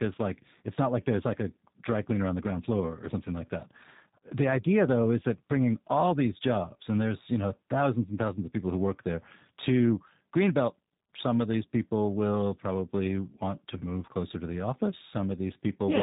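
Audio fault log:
Throughout: tandem speech coding. The speech sounds as if it passed through two speech coders in a row. The second re-encodes the first's already damaged output, so the roughness and warble stack up beyond what a single codec produces. Nothing above 3.8 kHz survives, and the layered artefacts fit a G.726 stage followed by G.729A.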